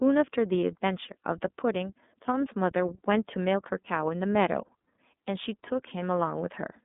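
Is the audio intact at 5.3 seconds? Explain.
No. At 5.3 seconds, as throughout the clip, the speech has passed through the iLBC codec. Each 30 ms frame has its excitation coded independently of the previous one, at a rate that fits iLBC's 13.33 kbps mode, and the line passes only about 200 Hz to 3.6 kHz. The result is plainly audible: the speech is band-limited and muffled, with a rough, slightly synthetic texture where the coded excitation stands in for the real one.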